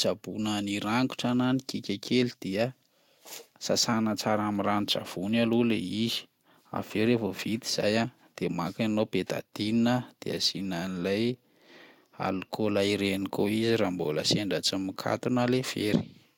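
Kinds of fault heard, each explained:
No technical fault can be heard anywhere in this speech recording. There is nothing to list under any heading here.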